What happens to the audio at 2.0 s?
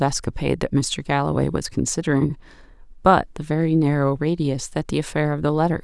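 Nothing goes wrong at 2.0 s; the speech there is intact, with no dropout, click, distortion or other fault audible at that moment.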